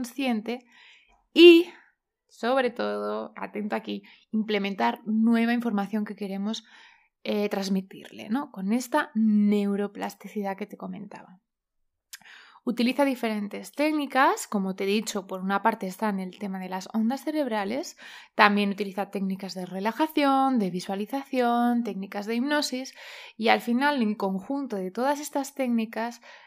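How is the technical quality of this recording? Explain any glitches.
Nothing stood out as a technical problem on listening, so there are no glitches to explain.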